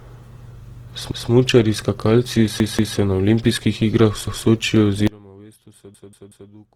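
Opus compression runs through the whole speech clip. The voice keeps its full bandwidth, up to about 20 kHz, but sounds noisy, rough and grainy, with plainly audible damage. That fits a low-rate setting near 16 kbps in the music-oriented CELT mode, where thin bands are filled with folded or noise content. Opus is the likely cause.

A repeated buffer first occurs from 1.12 to 1.30 s, when the same piece of about 186 ms plays one extra time. The device ran out of fresh audio and replayed what it already held, which fits an 8192-sample buffer. Each repeat causes a stutter with a hard join. The same fault returns from 2.60 to 2.97 s with two extra plays, just before "na olimpijskih igrah", and again from 4.27 to 4.46 s with one extra play.

An audio dropout to a faint residue begins abruptly at 5.07 s and lasts to the end. The signal falls to a faint leak about 25 dB below its normal level, likely because the signal feed was lost while the path after the break stayed live. 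Inside that gap, from 5.94 to 6.50 s, the faint residue also stutters, with a 186 ms piece playing three extra times.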